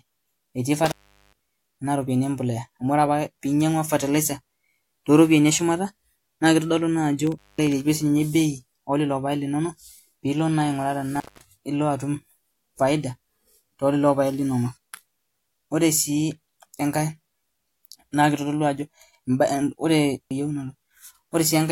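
Intermittent contact breaks the speech at 0.86–1.39 s, 7.27–7.67 s and 11.16–11.44 s: a loose connection opens, dropping the signal for about 410, 210 and 210 ms, with crackle at each edge and faint hiss during each gap.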